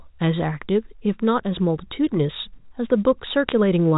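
Near the end, from 3.49 to 3.52 s, bit errors on a digital phone line put a short burst of sharp ticks over the speech. Flipped bits in the G.711 mu-law samples, at an error rate of roughly a fifth of a percent, corrupt single samples, and hits on sign or high-order bits produce the clicks.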